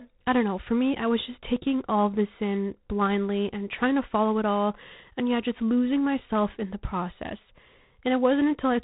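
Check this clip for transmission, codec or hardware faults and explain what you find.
One codec fault runs through the whole speech clip.

G.726 ADPCM, throughout: each sample is sent only as a coarse difference from an adaptive prediction, and the small number of bits per sample leaves plainly audible quantisation noise, which fits a 24 kbit/s setting. That noise comes across as a harsh, rasping hiss that rises and falls with the speech level. The band is telephone-limited, with nothing above 3.9 kHz, so the top end sounds muffled.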